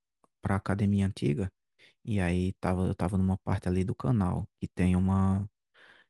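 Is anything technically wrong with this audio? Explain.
No, nothing technically wrong turns up anywhere in this speech recording, so there's nothing here to flag.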